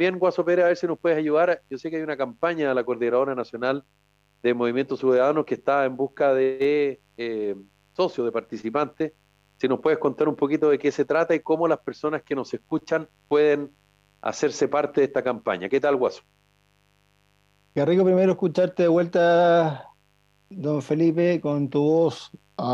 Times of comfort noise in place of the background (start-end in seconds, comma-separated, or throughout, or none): none